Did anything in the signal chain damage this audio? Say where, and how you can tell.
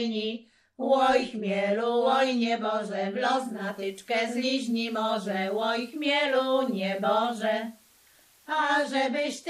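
Yes. At the receiver, digital radio blending to analogue: around 3.41 s it cross-fades over about 290 ms to the FM broadcast, bringing in faint hiss roughly 35 dB down and a level shift of about 1 dB, then blends back to digital at 8.75 s.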